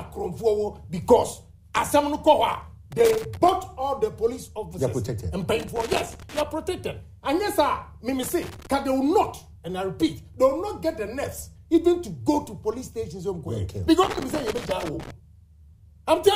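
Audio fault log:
2.92–3.49 s, 5.60–6.41 s, 8.23–8.67 s, 14.03–15.11 s: loose connector crackle, an intermittent contact chopping the signal, heard as irregular bursts of scratchy crackle.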